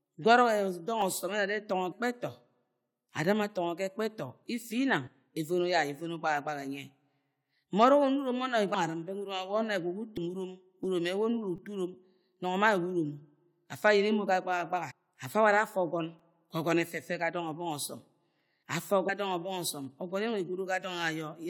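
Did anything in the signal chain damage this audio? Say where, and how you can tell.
Yes. At the driver or buffer stage there is a repeated buffer fault at 1.01 s, 11.56–11.58 s and 16.19 s. A tiny slice fitting a 5 ms buffer replays one to four extra times with hard joins. Because the slice is so short, each one is heard as a click or brief buzz.

At the codec or storage stage, compressed frames are skipped at 1.91, 5.06, 8.73, 10.16, 14.90–14.92 and 19.08 s. The sound jumps forward in whole 21.3 ms frames, losing roughly 70 to 300 ms each time.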